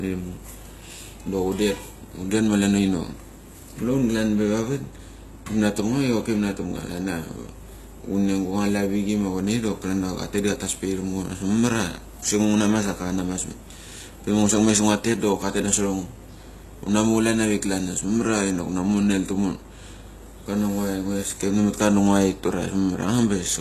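Throughout, the speech carries likely HE-AAC compression damage, plainly audible: replicated treble sounds gritty and lispy on s sounds, and a spectrogram shows nothing above 12.3 kHz.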